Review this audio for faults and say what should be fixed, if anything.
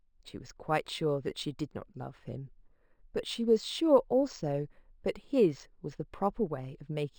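Throughout, there's imaging from linear upsampling: straight-line interpolation, likely from 12 kHz up to 48 kHz, leaves a faint mirror image around 6 to 12 kHz, roughly 30 dB down, giving sibilants a metallic shimmer. Next time, upsample with a proper windowed-sinc or polyphase filter instead of linear interpolation.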